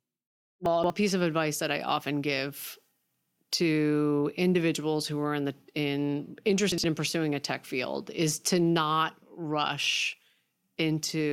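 Around 0.66 to 0.9 s the speech garbles briefly: chunks out of order, a 60 ms chunk landing three chunks late, so nothing's lost but the sequence jumbles across three hard joins. Same again at 6.72 to 6.84 s, one chunk late.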